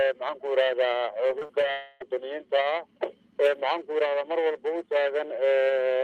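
The audio has two network faults close together. From 1.27 to 1.65 s there is repeated packet loss with a robotic sound: several short holes, the longest about 40 ms, are each patched by stretching the preceding sound. That continuation fills about a quarter of the span and makes it choppy and mechanical. A single long hole, not a string of brief ones, sets the next fault apart. From 1.71 to 2.02 s about 0.3 s of sound is replaced by a continuation of what came before. No silence appears, and the audio resumes without the missing part, which points to a likely long network dropout.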